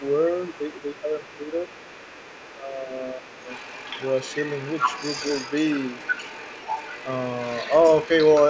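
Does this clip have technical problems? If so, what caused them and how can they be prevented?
Yes. Throughout the recording a second, fainter voice runs underneath the main speech, sitting somewhere around 15 dB below it. This is the other side's voice leaking through, most likely because the far side was playing from this talker's loudspeaker and the echo canceller left a residue in the microphone signal. Using a headset, or tuning the echo canceller to adapt more strongly, would prevent it.

The main voice also drops in level at 0.87 to 1.16 s, 1.37 to 1.58 s and 2.6 to 3.51 s. The first and third dips are deep, around 10 dB, and the middle one is shallower. This is likely speech suppressed in double talk: with both sides talking at once, the echo canceller probably turned everything down rather than separating the near talker from the echo. A network dropout would instead cut out in sharp gaps, not dip while the other voice is active. 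A canceller with better double-talk detection would prevent it. The absence of anything above 8 kHz is ordinary call bandwidth, not part of these faults.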